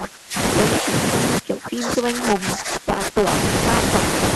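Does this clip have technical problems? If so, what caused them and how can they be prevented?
Yes. Buffer tearing runs through the whole clip. The program writing the playback ring buffer and the hardware reading it have drifted out of step, so they cross inside every period. About a tenth of each buffer replays speech from roughly 10 ms earlier, with hard joins on both sides. That produces a steady robotic buzz at 200 Hz, which fits a period of about 5 ms, heard only while speech is present. Re-aligning the write and read positions, or adding headroom so the writer keeps a safe lead, prevents it.

Speech suppressed in double talk occurs from 0.0 to 0.38 s, from 0.8 to 0.92 s, and from 1.39 to 3.29 s. The cause is likely an echo canceller that could not tell this talker apart from loudspeaker echo while the far side was also speaking, so it attenuated both. The voice sinks by about 25 dB in the first and last spans and about 10 dB in the short middle one. 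A canceller with better double-talk detection and less aggressive suppression would prevent it.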